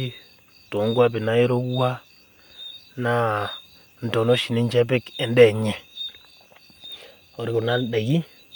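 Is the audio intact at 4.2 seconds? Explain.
Yes, at 4.2 seconds the speech plays through intact, with no audible fault at that moment.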